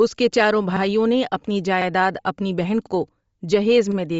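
Throughout the speech, a low-rate transform codec has thrown away much of the upper spectrum and filled it back in with noise. This is likely Bluetooth LC3 compression, and the plainly audible damage fits a bitrate around 32 kbps with short 7.5 ms frames. The result is a breathy, grainy edge on the speech, with the high end sounding hissy and synthetic rather than clean.

From 1.82 to 1.87 s, the processing chain has started a new chunk before the previous one finished. These overlapping chunks make a 50 ms piece of audio play twice at the join. It comes across as a brief stutter, a small hiccup where the sound seems to step back on itself.

At 2.18 s, one LE Audio frame was lost in transmission, about 7.5 ms worth. With a single lost frame, the decoder covered the gap by reusing the previous spectrum with scrambled signs rather than fading to silence. The result is a tiny noisy smear, a momentary roughness where the sound turns briefly to grit.

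From 2.87 to 2.92 s, the same overlapping-chunks fault recurs, again doubling a 50 ms piece. The gap between the two joins suggests chunks about a second long. Because the pattern repeats at this spacing, the stutter sounds like a regular processing artefact.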